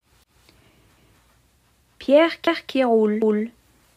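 You'll hear overlapping chunks at 0.24–0.47, 0.97–1.22, 1.72–1.97, 2.47–2.72 and 3.22–3.47 s. The audio was handled in 0.5 s blocks, each starting 250 ms before the last ended, so a quarter-second piece replays at every join, a regular stutter.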